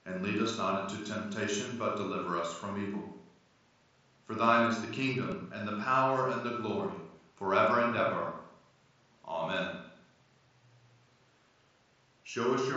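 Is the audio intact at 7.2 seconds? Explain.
No. At 7.17 s, between "power and the glory" and "forever and ever", there is a concealed Bluetooth headset packet loss. A voice packet between headset and phone went missing, a gap of about 7.5 ms that fits a single lost frame. The receiver filled it by repeating the closest-matching piece of the preceding waveform. Being so short, the patch is nearly hidden in the wideband mSBC-coded speech rather than an audible dropout.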